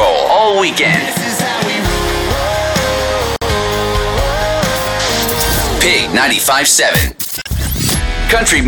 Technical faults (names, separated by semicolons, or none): gap at a join of encoded pieces